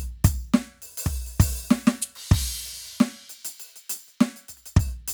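No technical faults are audible.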